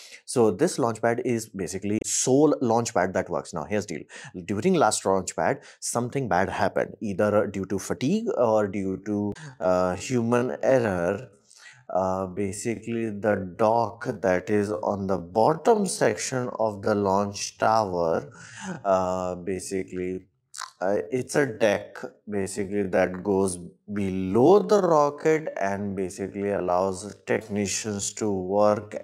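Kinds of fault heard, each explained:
Damaged data in a compressed stream: corrupted frames make the decoder lose sync and hunt for the next header, heard as brief blips near 1.97 s and 9.30 s.
Time-stretched section: from 8.72 s to the end the pace abruptly drops to 0.52 times speed at unchanged pitch, sounding dragged, likely from pitch-preserving stretching.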